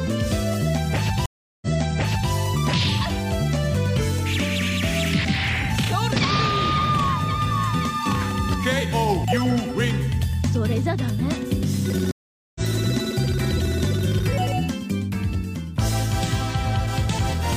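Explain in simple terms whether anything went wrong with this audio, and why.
Two stream reconnects occur. Each time the connection dropped, the player went quiet, reconnected, and restarted mid-stream. At 1.26 s the gap lasts 0.36 s and playback resumes 0.70 s earlier, repeating a bit. At 12.11 s, 0.44 s of silence, then it jumps about half a second ahead.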